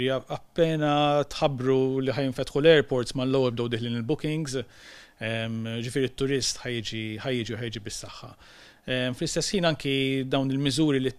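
No technical faults turn up anywhere in the audio, so there is nothing to describe in time order.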